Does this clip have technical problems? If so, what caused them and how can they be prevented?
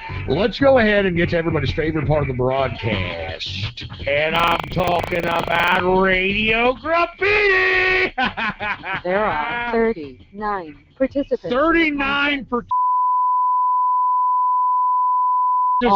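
Yes: from 4.32 to 5.84 s there is buffer tearing, a rattling 25 Hz buzz. The writer and reader of the audio ring buffer have slipped, so each 40 ms period carries a small slice of audio from roughly 70 ms earlier, joined hard on both sides. Unlike dropouts, nothing goes silent; the buzz rides on the signal itself. Keeping the writer's position locked to the hardware read pointer, with enough headroom between them, prevents it.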